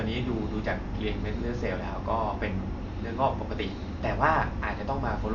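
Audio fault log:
Throughout: Dolby Digital compression, likely. The speech is dull and ends sharply near 7 kHz. Rough, fluttering noise clings to voiced sounds. Starved of bits, the encoder narrows the band and leaves frequency lines bare, which the decoder fills with dither noise. Heavy damage, which fits about 48 kbps.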